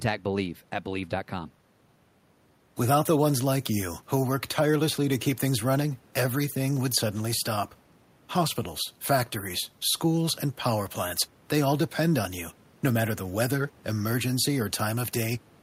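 Nothing technically wrong turns up in this speech recording, and the only thing underneath is a little room noise sitting about 33 dB below the speech.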